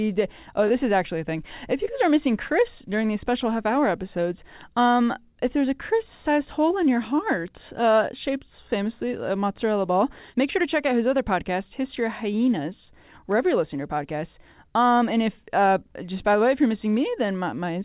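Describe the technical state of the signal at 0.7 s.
A brief smear sits between 0.68 and 0.72 s, just before "is actually a thing". It is short concealed packet loss: about 20 ms of audio arrived too late, so the receiver stretched the preceding sound across the gap, then blended back into the real signal.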